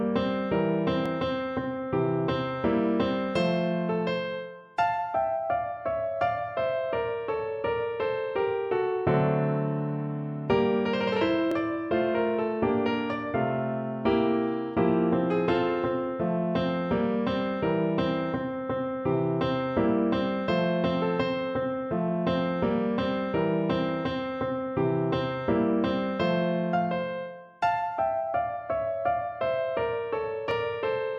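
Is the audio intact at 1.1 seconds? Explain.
No. At 1.06 s there is a dropped buffer (overrun). The sound jumps forward. There is no gap of silence. The two sides simply butt together, and roughly 15 ms of audio is missing. The likely cause is that the recording program fell behind. The hardware then overwrote a block of samples before they were collected. That block was lost, and what came before was joined straight to what came after.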